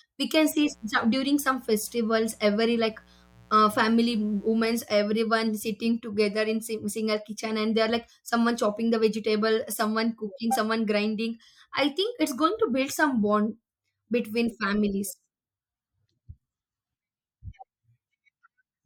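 From 0.66 to 4.74 s, after "we can see", a raspy 60 Hz mains buzz sits low under the speech. Switching-spike harmonics reaching kilohertz distinguish it from smooth hum.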